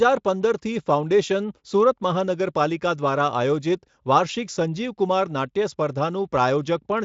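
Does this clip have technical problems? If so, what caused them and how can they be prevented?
No technical faults detected.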